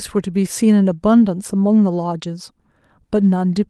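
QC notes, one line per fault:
No faults to note for this speech clip.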